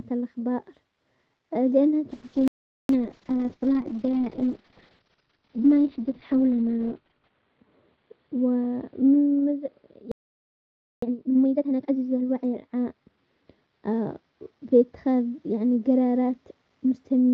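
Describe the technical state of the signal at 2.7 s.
At 2.7 s the output is inside a playback stall that runs from 2.48 s to 2.89 s, about 415 ms. The player likely ran out of buffered data or had its thread blocked, so nothing reached the output until it recovered. The sound breaks off mid-flow and there is plain silence for that stretch, then it resumes.

The same moment also falls within a call bitrate drop that begins at 2.13 s and lasts to the end of the clip. The call's bandwidth estimate fell, so the Opus encoder was pushed from 32 kbps down to 6 kbps and its coded bandwidth shrank from 12 kHz to 6 kHz. Once the sound returns after the gap, it is muffled and duller, with a rough, watery texture from the much coarser coding.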